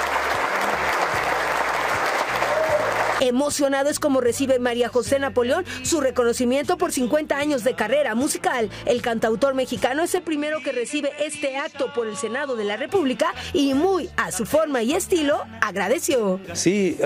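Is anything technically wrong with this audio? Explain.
Yes. From 10.18 s to 12.89 s the sound turns duller and a few decibels quieter, with nothing above 11.4 kHz, then returns to full bandwidth with no gap at either boundary. A faint new noise floor, well below the signal, sits under that stretch. This most likely comes from an input switched to a poorer device, a narrower-band microphone with its own gain and self-noise. On a spectrogram the band above 11.4 kHz empties abruptly for that span, and the waveform envelope shrinks slightly.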